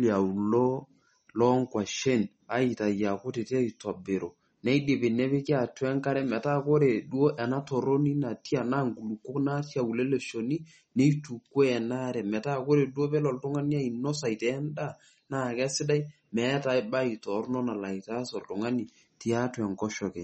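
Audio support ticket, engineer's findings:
Speech path likely run through MP3 compression at a starved bitrate, fits about 32 kbps. Encoder short of bits: treble cut at 8.4 kHz, weak spectral lines toggling frame to frame. Throughout: dull top end, watery swirl, chirpy s sounds, smeared onsets.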